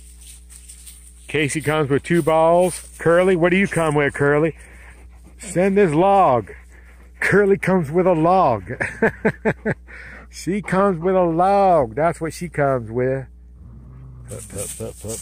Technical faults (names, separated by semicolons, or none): mains hum